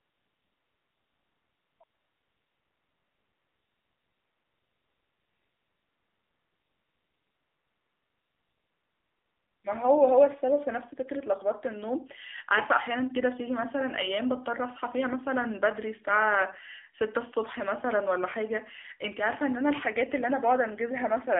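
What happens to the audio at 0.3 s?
At 0.3 s you're inside AMR comfort noise, which runs from 0.0 to about 1.8 s. No speech frames come through there, so the receiver fills the gap with smooth, steady synthetic hiss instead of the real background. Over the whole clip, including this moment, the AMR narrowband mobile codec squeezes everything into 300 Hz to 3.6 kHz and adds plainly audible buzzy, synthetic coloring, which fits a low mode around 7.4 kbps.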